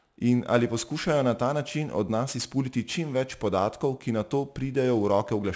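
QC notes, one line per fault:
Throughout: aliasing. The speech was brought down from 44.1 kHz to 16 kHz with no low-pass first, so anything above 8 kHz folds back under that edge as unrelated tones, sitting roughly 20 dB below the signal. That's why the sibilants sound gritty and metallic, and the top end runs right up to 8 kHz.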